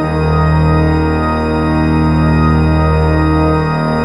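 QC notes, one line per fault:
No fault to list in these QC notes.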